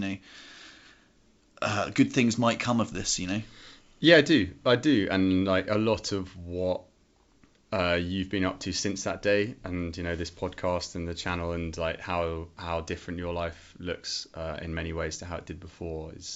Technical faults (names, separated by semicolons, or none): none